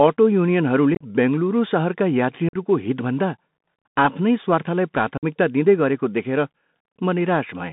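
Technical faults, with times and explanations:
Throughout: Bluetooth CVSD headset codec. The speech is confined to roughly 150 Hz to 3.7 kHz, with grainy hiss, scratchy s sounds and slope-overload distortion on loud high content.
0.95 to 1.05 s: unconcealed Bluetooth headset packet loss, just before "बेङ्गलुरू सहरका". About 52 ms of audio dropped in scattered gaps over 60 ms, the longest 37.5 ms, leaving abrupt chopped holes.
2.49 to 2.56 s: unconcealed Bluetooth headset packet loss, right after "बेङ्गलुरू सहरका". About 45 ms silenced with hard edges, and the speech resumes briefly quieter as the CVSD step size recovers.
5.18 to 5.24 s: unconcealed Bluetooth headset packet loss, between "आफ्नै स्वार्थलाई" and "दिँदै गरेको". About 52 ms replaced by silence, giving an abrupt hole.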